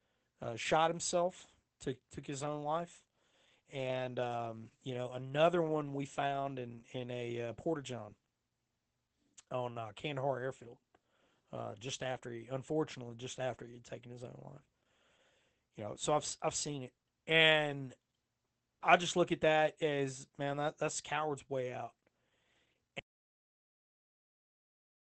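Throughout the speech, Opus voice compression is plainly audible. At 12 kbps the encoder runs in SILK mode, coding the voice with linear prediction in 20 ms frames and keeping a wideband range that stops at 8 kHz. The excitation is quantised coarsely, so the speech sounds muffled, slightly hoarse and faintly robotic. A plain low-pass filter would dull the top end in the same way but leave no grainy, synthetic roughness.

From 23.0 s to the end, about 2 s, the audio drops out to silence. The speech stops abruptly and what follows is silence, with no room tone or noise floor underneath. The likely cause is that the input was lost, through a disconnected device or a failed link, while the recording carried on writing silence. A noise gate or fade would taper the sound and leave some trace of the room. Here the cut is instant and the gap is completely empty.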